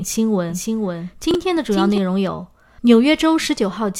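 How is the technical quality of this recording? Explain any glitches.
The recording has two glitches, and they overlap in time.

From 0.50 to 1.98 s a second copy of the sound trails about half a second behind, roughly 5 dB quieter, cutting in and out abruptly. This doubled audio track likely comes from a slower second capture path.

At 1.31 to 1.35 s there is a brief garbled jumble: chunks out of order, where one 10 ms chunk plays three chunks late, leaving hard joins.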